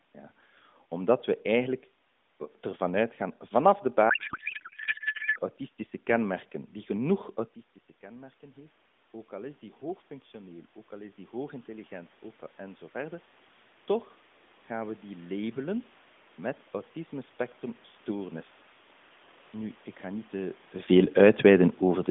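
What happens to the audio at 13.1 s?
Automatic gain rising, from 8.0 to 21.6 s, after "kenmerken die genoeg autistische". The input dropped about 17 dB. The gain slowly climbs about 12 dB, so speech and room noise swell together.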